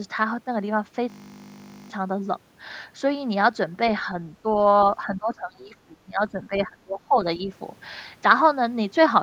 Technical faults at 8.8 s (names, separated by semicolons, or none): none